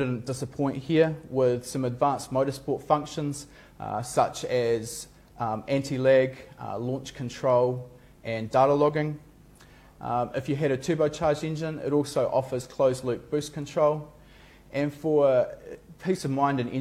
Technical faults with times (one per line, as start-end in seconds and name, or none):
none